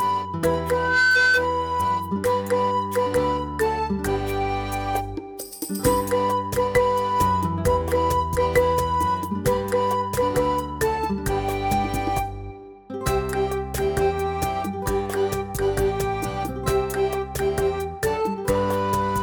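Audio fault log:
0.70 to 1.49 s, loudspeaker feedback squeal: a steady 1.5 kHz tone swells up over roughly a third of a second and sits about 5 dB above the sound. The mic's picking up its own speaker, and at that frequency the loop gain tops one, so it keeps feeding itself.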